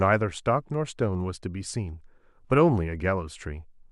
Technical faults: none

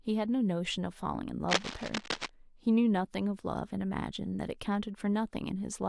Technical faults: cable scratch noise

